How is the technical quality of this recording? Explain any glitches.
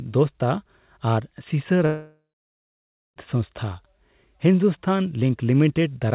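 The recording has one serious glitch: a gap of about 1.3 seconds where the sound breaks off, and nothing above 4 kHz comes through the narrowband call path at any point.

From 1.86 s to 3.18 s there is a long network dropout, likely caused by packets failing to arrive. The receiver stretches the last sound into a fading buzz, which gives way to about 0.94 s of near-silence. The audio then resumes with roughly 1.3 s of the original permanently missing.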